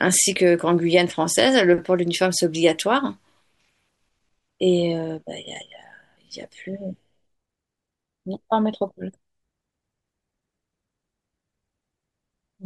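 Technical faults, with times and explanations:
No technical faults can be heard in this speech recording, and the signal holds steady from beginning to end.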